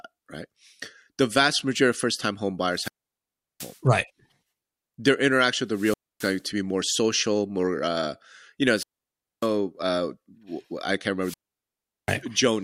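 Wireless microphone squelch dropouts hit at 2.69, 5.69, 8.74 and 11.19 s. Each time the radio link fades and hiss rises. Then the squelch mutes the speech for 0.27 to 0.74 s.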